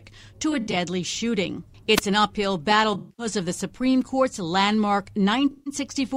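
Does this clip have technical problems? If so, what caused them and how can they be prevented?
Yes. There is AAC frame loss with concealment at 0.52 to 0.76 s, 2.93 to 3.26 s, and 5.51 to 5.73 s. Lost frames were rebuilt from the last good spectrum, so each patch sounds smeared and noisy. About 128 ms, 213 ms and 149 ms went missing. The middle patch, between "an uphill battle" and "of the", has a run of roughly 150 ms. Error correction or retransmission on the stream would prevent this.

A wireless microphone squelch dropout occurs from 1.96 to 2.01 s, just before "an uphill battle". The radio signal faded, hiss rose, and the receiver's squelch cut in for a brief mute. Better antenna placement, diversity reception and a closer transmitter would prevent this.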